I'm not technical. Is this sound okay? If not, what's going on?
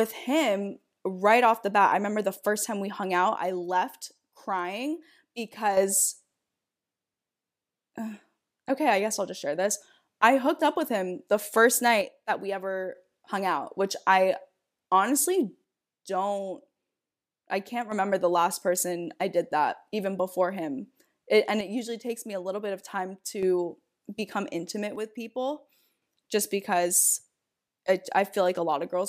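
No. The speech abruptly drops to a noticeably quieter level five times, from 3.37 to 5.77 s, 12.01 to 12.95 s (after "with him the first"), 15.64 to 17.92 s, 21.61 to 23.43 s, and 24.96 to 26.02 s (after "become intimate"). The likely cause is one channel dropping out, where one side of a stereo recording cuts off briefly. Unlike a gradual fade, the volume falls in a single sudden step and jumps straight back afterwards.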